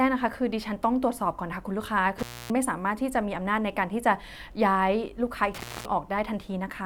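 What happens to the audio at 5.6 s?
At 5.6 s the speech falls inside an intermittent contact fault running from 5.55 to 5.85 s. A loose connection in the signal path breaks for about 0.25 s, so the signal drops out with crackle as the contact opens and again as it closes, and only faint hiss remains during the gap. On a waveform this shows as a sudden near-flat stretch bounded by sharp spikes; a spectrogram shows a low-energy band with thin broadband vertical lines at each edge.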